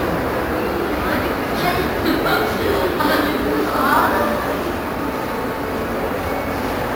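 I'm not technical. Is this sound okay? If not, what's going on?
No, there's imaging from sample-and-hold upsampling: each sample was simply repeated to raise the rate, adding a bright metallic fizz that follows the sound throughout.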